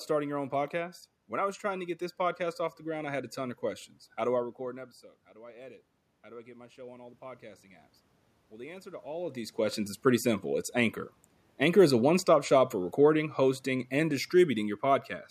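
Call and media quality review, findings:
Automatic gain rising, 4.59–7.92 s, just after "do I". AGC in the capture path sees input drop about 19 dB as the talker moves back around 4.5 s, then ramps gain up about 5 dB; voice and room noise swell together.

Automatic gain rising, 8.5–10.04 s, ending before "simple it's". Same AGC reacts to a quieter input, with the talker also shifting around 9 s, lifting gain about 3 dB over roughly 1.5 s; background rises with the voice.

Automatic gain falling, 11.54–15.17 s. AGC judges input too loud or its noise too strong and lowers gain about 4 dB over more than 3 s; level starts high and sinks steadily, with room noise dropping at the same rate.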